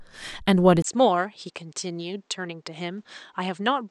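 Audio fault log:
0.82–3.91 s input switched to a poorer device: after a 20 ms gap, the audio falls about 10 dB and loses everything above 8.7 kHz, likely from a narrower-band microphone.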